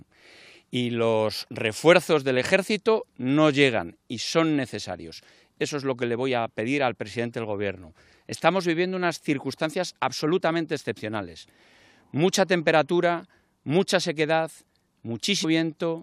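At 15.43 s, a brief glitch marks damaged data in the compressed stream: corrupted frames are misread before the decoder resyncs.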